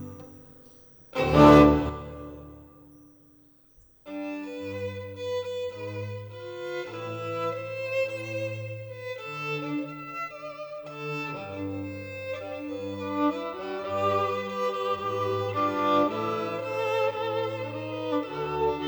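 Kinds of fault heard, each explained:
One channel drops out: from 1.89 s to the end the level falls abruptly by about 6 dB, likely because one stereo channel went silent before the mono sum. The waveform steps down to half height and the spectrogram dims uniformly.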